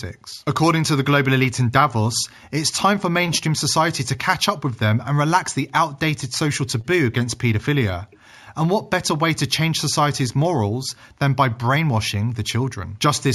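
Throughout the speech, there is imaging from linear upsampling. The sample rate was raised by joining neighbouring samples with straight lines, which filters poorly, and the result fits a conversion from 16 kHz up to 48 kHz. The top of the original band comes out dulled, and a mirrored copy of the spectrum leaks into the 8 to 16 kHz range at roughly 20 dB below the signal, adding a faint metallic shimmer to sibilants.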